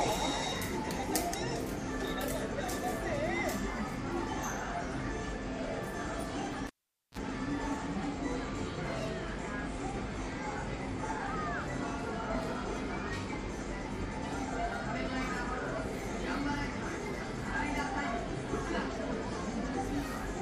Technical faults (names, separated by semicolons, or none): cable pulled and plugged in